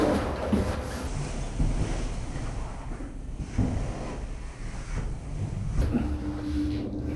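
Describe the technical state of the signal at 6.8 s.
At 6.8 s the signal is intact, with no technical fault audible at that point.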